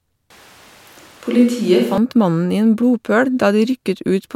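From 0.30 to 1.98 s the speech turns abruptly roomy and hollow, thinner in the bass with faint background noise, likely a switch to a distant microphone after the close one dropped out.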